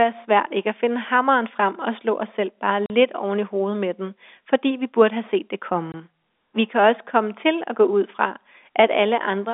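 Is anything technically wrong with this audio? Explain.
Yes. Packet loss filled with silence occurs at 2.86 to 2.90 s, between "slå os selv bare" and "oven i hovedet med", and at 5.92 to 5.94 s, just after "burde have set det". Packets never arrived, so the receiver inserted silence for 40 ms and then 20 ms, which fits two 20 ms packets and then one. The speech cuts out abruptly, with hard edges.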